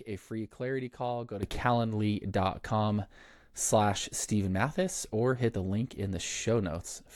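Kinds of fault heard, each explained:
Sudden gain jump: At 1.43 s the speech abruptly becomes louder by about 11 dB and stays there to the end. The background noise rises by the same step. The likely cause is a digital gain change applied instantly, with no ramp between samples.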